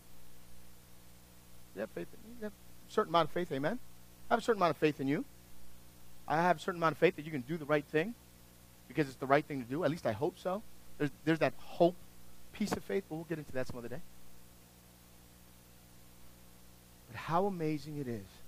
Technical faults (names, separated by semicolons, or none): none